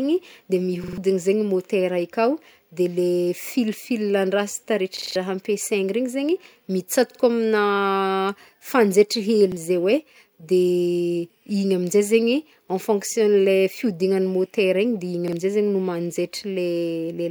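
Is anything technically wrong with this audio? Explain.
Yes. A repeated buffer fault occurs five times, at 0.84–0.98, 4.97–5.16, 7.11–7.20, 9.52–9.57 and 15.28–15.33 s. New audio arrived late, so the device replayed its last 46 ms block, which fits a 2048-sample buffer. The first event repeats it three extra times, the second four times, the third twice, and the last two once each. The speech stutters with a hard join at each repeat, and up to about a fifth of a second is lost.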